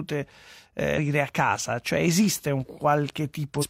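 Brief glitches break the speech at 0.93–0.99 s, just before "a casa", and at 3.53–3.65 s: damaged data in the compressed stream, where the decoder misread frames and lost sync.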